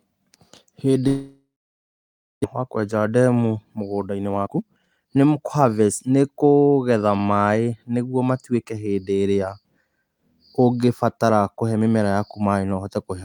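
At 1.07 s the speech breaks off. The last bit of sound smears on as a fading buzz, then there's close to a second of silence before things pick up again at 2.46 s with "wa kũenja ndemu". About a full second of speech never comes back. That's the classic sound of a long network dropout, likely packets that never arrived, with the receiver filling the gap and then jumping ahead. The whole episode also shifts the timing by roughly a third of a second.

From 4.15 s to 5.73 s the speech rushes. It runs at about 121% of normal speed, but the pitch stays where it was, so it sounds hurried rather than chipmunky. This is a jitter buffer speed-up. The receiver was sitting on more buffered audio than it wanted, so it trimmed out lots of tiny pitch-period slices in a row, around 300 ms in total, to catch up. Normal pace returns at "nĩ kũgetha maĩ nĩguo".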